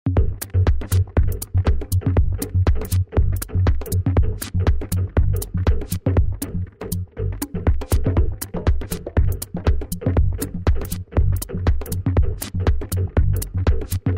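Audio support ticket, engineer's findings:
Nothing stood out on listening to this recording.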